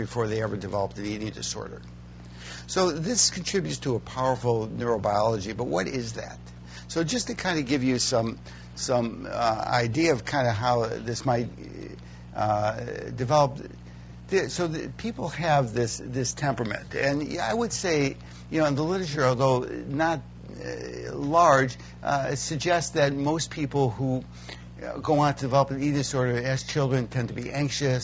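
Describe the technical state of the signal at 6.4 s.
At 6.4 s the signal is intact, with no dropout, distortion, glitch or other technical fault audible at that moment.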